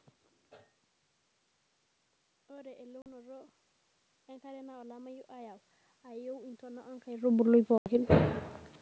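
At 3.02 s comes packet loss on an ADPCM call: a hole of about 40 ms, a couple of packets' worth, cut in abruptly and filled with silence. The decoder's adaptive predictor and step size lose track of the sender's, so the sound comes back slightly distorted. It settles within tens of milliseconds. That abrupt edge and the short recovery set it apart from a plain dropout or a fade.

From 4.4 s to about 8.37 s, automatic gain rising lifts the level by about 9 dB. The control reacts to an input that has fallen by about 20 dB and raises its gain slowly over several seconds. The room noise swells along with the speech, which separates this from the talker shifting position near 7.0 s. That movement changes only the voice, not the background.

At 7.78 s a second, longer packet loss on the ADPCM call opens a gap of about 80 ms, roughly four packets. It has the same hard edges, and the same slightly distorted return, before the decoder catches up.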